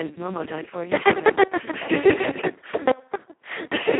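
Speex codec damage runs throughout: a bitrate near 2 kbps starves the excitation, making the speech hoarse and robotic, band-limited to 150 Hz–3.5 kHz with nothing above 3.8 kHz.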